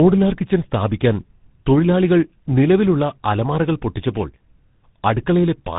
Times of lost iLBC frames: none

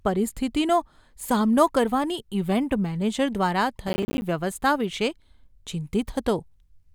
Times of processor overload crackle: 3.88-4.22

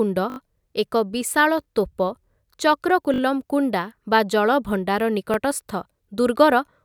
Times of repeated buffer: 0.30-0.38, 1.64-1.66, 3.14-3.20, 5.34-5.36

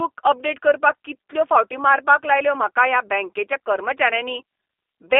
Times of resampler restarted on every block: none

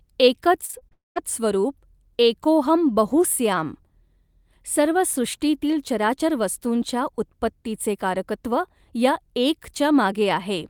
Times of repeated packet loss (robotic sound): 0.65-0.93

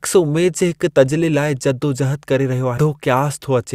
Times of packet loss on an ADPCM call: none

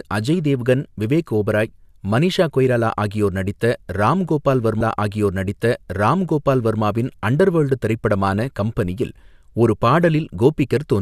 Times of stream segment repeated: 4.80-6.80

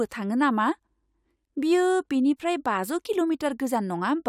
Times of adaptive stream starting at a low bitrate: none

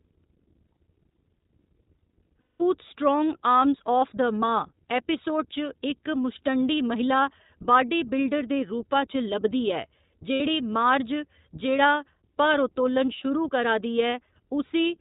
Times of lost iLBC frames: 2.41-2.62, 10.34-10.41, 13.07

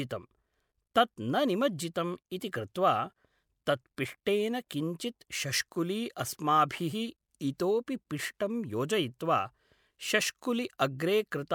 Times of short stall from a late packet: none

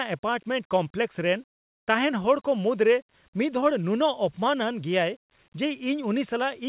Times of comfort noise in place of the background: 1.58-1.86

